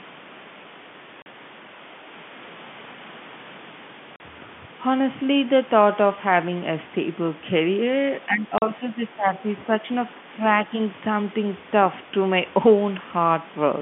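Packet loss filled with silence at 1.22 to 1.26 s and again at 4.16 to 4.20 s: each hole lasts 40 ms, which fits two lost 20 ms packets. The receiver had nothing to play for that stretch and inserted plain silence instead of concealing the gap, so the speech drops out abruptly. Each gap has hard edges on both sides, and the narrow telephone-band sound of the line runs straight into dead air.

Speech suppressed in double talk from 8.26 to 9.83 s: the talker's level sinks by up to about 10 dB in uneven pieces, adding up to roughly a second of affected sound across that span. The likely cause is an echo canceller that could not distinguish the near talker from echo of the far side while both were active, so it turned everything down. Inside this stretch, a further 40 ms silence-filled packet loss at 8.58 to 8.62 s cuts a clean hole into the speech.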